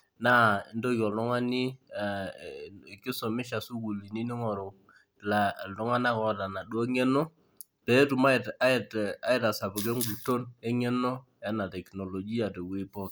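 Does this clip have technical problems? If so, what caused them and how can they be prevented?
No, there are no technical faults to be heard in this speech clip. There is nothing here that calls for a cause or a preventive measure.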